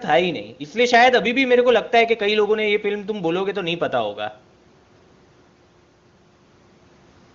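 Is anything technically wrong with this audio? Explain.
No, nothing here is faulty: the speech comes through the AMR wideband (HD Voice) codec at 23.85 kbit/s, its highest rate, and stays clear with at most faint coding traces.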